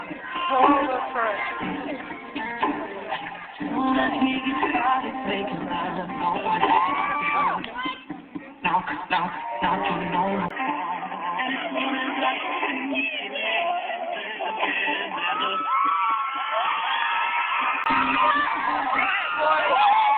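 The input likely switched to a poorer device from 10.49 to 17.86 s. After a 20 ms gap, the sound turns boxy and quieter, with nothing above 3.4 kHz and faint new noise.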